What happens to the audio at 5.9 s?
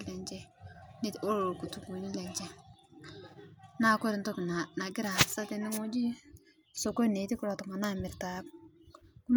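Nothing goes wrong at 5.9 s: the speech carries on cleanly through that moment with no dropout, click, glitch or other fault.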